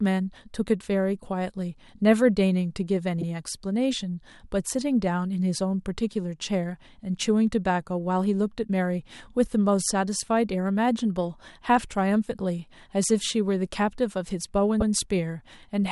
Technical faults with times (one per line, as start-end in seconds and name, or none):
0.11-15.87 clock slip clicks
3.21-3.25 repeated frames
14.80-14.89 repeated frames